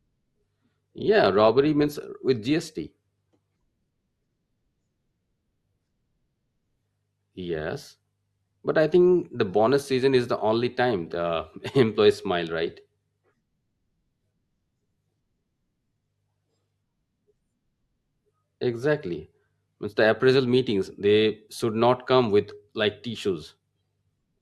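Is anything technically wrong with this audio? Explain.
Yes. From 0 to 2.0 s the speech is a low-bitrate adaptive stream start: the player opened on a cheap version, then stepped up once it had measured the connection. Treble is dull and codec smearing is stronger, which fits roughly 32 kbit/s Opus rising to 64 kbit/s. Unlike a dropout or rebuffer, the quality improves abruptly with no gap.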